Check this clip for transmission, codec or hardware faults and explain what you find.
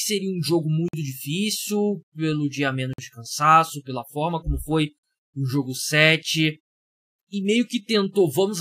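There is one fault, a gap between chunks. The audio arrives in 2-second chunks with 50 ms of silence inserted at each join, at 0.88, 2.93 and 4.98 s, so the sound breaks into short, hard-edged holes.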